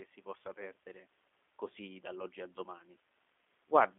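Throughout the recording the speech has passed through a G.729 codec, which fits the G.729A variant at around 8 kbit/s. Instead of sending the waveform, the codec rebuilds each 10 ms frame from a vocal tract filter, a pitch predictor and a few pulses, over a telephone line band of about 250 Hz to 3.5 kHz. Nothing above 3.7 kHz survives, so the speech sounds narrow and muffled, with a plainly audible rough, synthetic edge.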